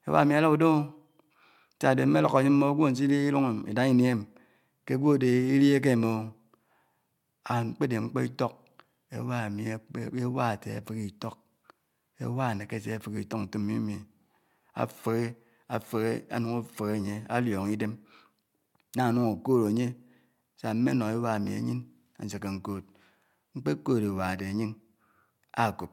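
No audible technical faults.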